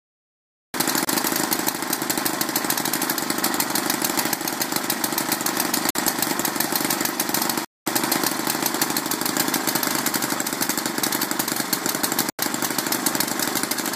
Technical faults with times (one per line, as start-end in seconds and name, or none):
1.05-1.07 Bluetooth stall
5.90-5.95 Bluetooth stall
7.65-7.86 Bluetooth stall
12.30-12.39 Bluetooth stall